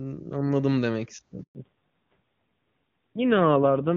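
Speech that cuts to silence at 1.43 s for 120 ms, until 1.55 s, is a handover gap: the call moved between networks and no speech frames arrived during the switch, so that stretch is simply lost. From 1.55 s to the end the sound turns muffled and rougher, with nothing above 4 kHz. This is a fallback to narrowband, where the call dropped from HD Voice (AMR-WB, clean at its high rate before the gap) to AMR-NB at a low rate, which fits roughly 5.9 kbit/s.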